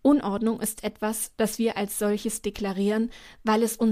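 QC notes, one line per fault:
No faults heard anywhere in this speech recording.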